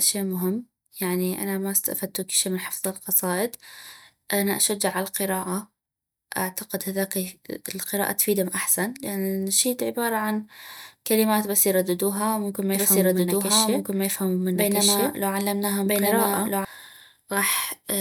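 A doubled audio track runs from 12.75 s to 16.65 s, starting just after "بس يرددها ممكن ما". A second full-band copy of the speech trails the original by about a second and a half, at roughly the same loudness, so two overlapping streams compete. The copy has no reverberant tail or room colouring, and it cuts in and out abruptly at both ends. This most likely comes from the signal being captured again through a slower path.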